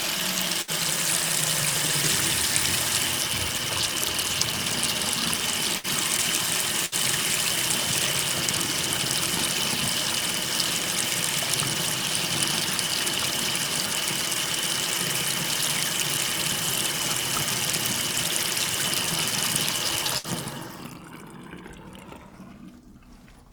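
A recording of everyday sound with four bursts of packet loss, at 0.61 to 0.71, 5.78 to 5.87, 6.86 to 6.95 and 20.18 to 20.27 s. Each time, roughly 60 ms of packets failed to arrive and the receiver extended the last sound, fading it for about 60 ms before resuming with 60 ms of audio gone.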